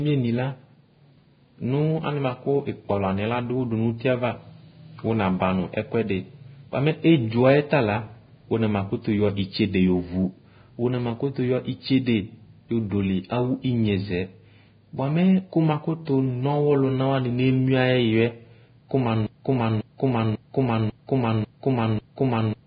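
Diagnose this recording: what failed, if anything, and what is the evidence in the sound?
The speech is hissy and grainy throughout, with a dull top: nothing reaches above about 4.9 kHz, sibilants turn to rough noise, and consonant onsets are smeared. This points to the codec stage, most likely heavy Vorbis compression at a very low rate, around 16 kbps. At that rate the encoder drops the cut-off and quantises the remaining treble so coarsely that fine detail is replaced by noise of similar energy, which roughens the tonal parts of the voice.

From 19.27 s to the end, a 0.54 s fragment repeats exactly, back to back, six times, a broken-record loop with no new speech after it begins. The identical repeats suggest a playback or streaming stage that stalled and kept re-sending the last buffered piece. The likely cause is a stalled player, encoder or stream. Whatever should have been heard in those final 3.4 seconds is lost.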